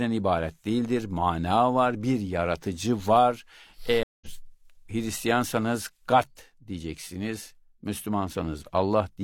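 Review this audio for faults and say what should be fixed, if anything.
Right after "var bir yaratıcı var" the speech drops out from 4.03 to 4.27 s, with about 183 ms of silence, then picks up roughly a fifth of a second further on, so a short stretch is skipped. This is a stream reconnect: the connection broke, the player reconnected, and a fresh decoder resumed mid-stream at a later point. To fix it, give the player a larger network buffer and let it resume from the exact byte or segment offset on reconnect, so a brief dropout neither silences nor skips the audio.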